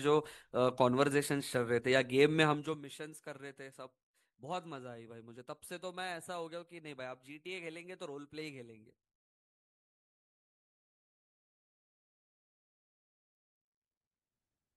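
Zipper noise runs from 2.47 to 2.83 s in this speech clip, a fine ticking or zipping laid over the sound while its level drops by roughly 15 dB. The gain is being moved in discrete jumps, at a rate of around 150 per second, rather than glided, so each jump leaves a tiny click in the waveform and the rapid train of them forms the zip.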